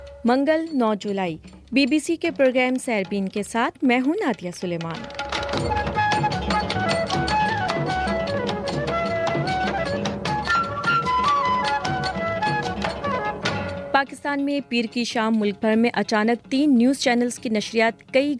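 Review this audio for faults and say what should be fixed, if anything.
No faults; nothing needs fixing.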